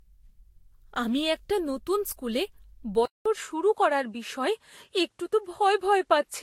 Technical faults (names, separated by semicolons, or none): generation loss; input switched to a poorer device